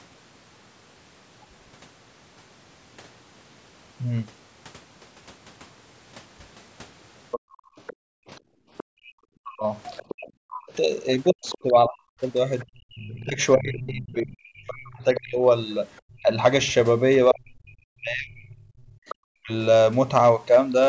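Other side's voice leaking through, from 7.31 to 13.24 s: a second voice sits roughly 20 dB under the talker. The likely cause is that the talker's loudspeaker played the far end and the echo canceller left a residue in the microphone.

Background gated by the echo canceller, from 7.4 to 9.12 s: the room sound drops out for about one and a half seconds in total, at worst by about 38 dB, because the canceller clamped the microphone while the loudspeaker was active.

Speech suppressed in double talk, from 9.4 to 19.51 s: the talker's own speech dips and cuts out in fragments, around five seconds in all, at worst by roughly 40 dB. Both sides were likely speaking at once, so the canceller could not tell near speech from echo and turned everything down.

Background gated by the echo canceller again, from 12.65 to 12.85 s: a brief hole of about 31 dB opens in the room sound.

Other side's voice leaking through, from 15.15 to 16.0 s: the far voice returns, now roughly 15 dB below the talker and more noticeable.

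Other side's voice leaking through, from 19.09 to 19.15 s: a final scrap of the far voice, roughly 20 dB down, shows up as a short blip. Across all of these, nothing in the audio rises above 8 kHz, as set by the call's microphone processing.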